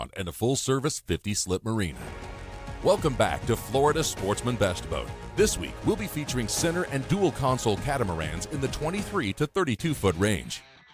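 Nothing stood out on listening to the audio.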